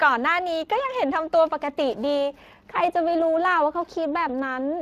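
A speech clip with Speex codec damage throughout, plainly audible as a hoarse, noisy coarseness from starved CELP excitation, a sound consistent with roughly 22 kbps. The upper band is a shaped, noise-like fill rather than real detail, and nothing reaches above 15.3 kHz.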